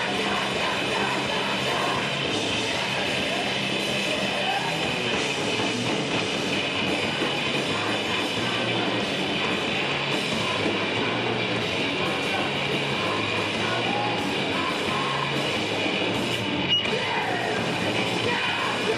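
No technical faults are audible anywhere in the recording.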